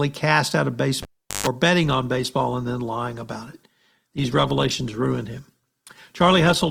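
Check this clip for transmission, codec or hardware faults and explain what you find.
Two faults stand out in this speech clip.

Cable pulled and plugged in, 1.02 to 1.47 s, just after "cast out of": a live lead is unplugged, giving a pop, about 0.39 s of near silence, then a 0.14 s burst of 50 Hz mains buzz as the tip touches, and a second pop as the sound returns.

Adaptive stream at a lower bitrate, from 1.82 s to the end: the stream abruptly switches to a leaner version with no gap. Codec artefacts grow heavier, consistent with Opus dropping from around 64 to 16 kbit/s.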